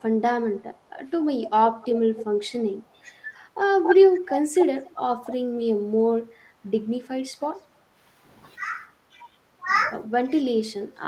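From the start to 2.25 s a delayed copy of the speech trails it by about 266 ms, roughly 10 dB down. This is an echo leak, likely from a far-end loudspeaker whose echo canceller let part of its microphone pickup return. Inside it, at 1.42 s, the voice dips slightly for about 70 ms: speech suppressed in double talk, likely the canceller turning down its own talker along with the loudspeaker echo while they overlap. From 2.72 to 5.47 s the voice drops in pieces by as much as about 20 dB, about half a second in total, as the same suppression clamps down again. Over 3.83 to 5.34 s the echo returns stronger, only about 5 dB under the speech, at a 283 ms delay. A faint echo scrap at 7.04 s, about 294 ms late, is followed at 7.11 s by a brief 70 ms dip of about 20 dB. From 9.13 s to the end the speech is held down again, by up to about 25 dB.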